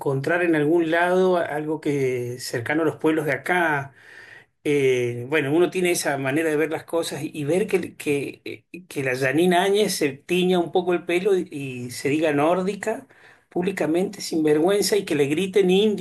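No technical faults can be heard anywhere in the recording.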